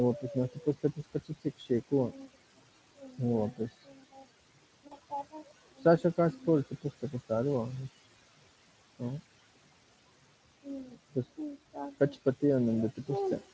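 Across the whole recording, noise suppressor artifacts are present. The room noise is pushed down by about 20 dB in the pauses and swells back under each phrase, so the background pumps with the speech. On a spectrogram, the noise floor drops to near-empty between phrases and reappears as a speckled, patchy haze beneath the speech harmonics.

From 0.2 to 3.2 s, the suppressor treats parts of the speech itself as noise, so this is speech cut by the noise suppressor. Quiet consonants and word tails are dropped by up to about 21 dB, adding up to roughly a second and a half. They sound swallowed and faint. The same thing happens from 3.52 to 7.31 s (up to about 22 dB, around two seconds in total), from 8.05 to 12.43 s (about 22 dB, roughly a second and a half), and from 12.92 s to the end (about 19 dB, a brief fraction of a second). In the waveform, syllable edges are clipped short in level. 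On a spectrogram, the faint high-frequency consonant energy is missing.

Inside the second span, between 4.87 and 4.97 s, there is VoIP packet loss concealed by the speech codec. About 40 ms of audio was lost, which fits two 20 ms frames. The decoder carries the last pitch and spectral shape forward and lowers its gain. The result is a brief stretched sound that fades, and the speech stays weak or distorted for a moment after the lost section. The spectrogram shows the stretched sound fading out instead of normal formant movement.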